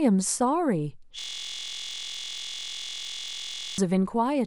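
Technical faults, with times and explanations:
1.19–3.78 s, system hang loop: the playback stalled while the sound hardware kept replaying one 23.22 ms slice of the speech, which fits a 1024-sample buffer. Over a hundred exact repeats at 43.1 Hz merge into a steady, droning buzz.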